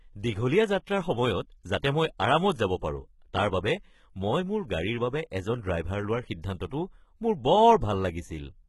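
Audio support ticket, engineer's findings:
Speech treble gritty, metallic or lispy on s sounds throughout, nothing above 11.8 kHz. Heavy codec damage, likely HE-AAC compression at a rate that fits 16 kbps. Upper band rebuilt by spectral band replication from copied lower bands, harmonics misaligned across the crossover.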